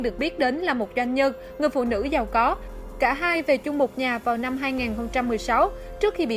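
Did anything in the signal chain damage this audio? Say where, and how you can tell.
No, nothing in the signal chain damaged this audio.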